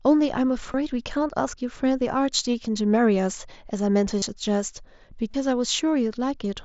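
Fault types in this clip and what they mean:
Concealed Bluetooth headset packet loss: lost packets refilled with repeated recent waveform, 15 to 30 ms buzzy patches; waveform shows copied cycles, spectrogram steady harmonic lines.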